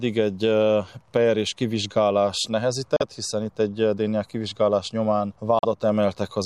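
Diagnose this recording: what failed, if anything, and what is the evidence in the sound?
Codec stage: you get two abrupt dropouts to dead silence, at 2.96 to 3.02 s and again at 5.59 to 5.65 s, each 60 ms long. That's corrupt frame muted: flipped bits made the decoder reject frames, which fits a pair of 30 ms frames each time, and the player filled silence without losing timing.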